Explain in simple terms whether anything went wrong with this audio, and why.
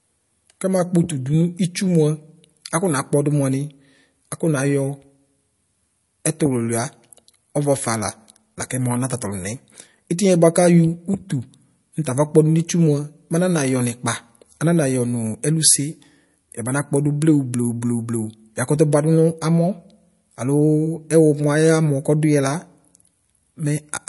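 Yes, something's off, and it runs through the whole recording: the sound has that watery, swirly quality, which points to heavy MP3 compression as the likely cause. When an MP3 encoder is starved of data, it chops off the treble and drops quieter detail that flickers in and out between moments. So the speech loses its crispness, s sounds get a metallic edge, and the starts of sounds smear.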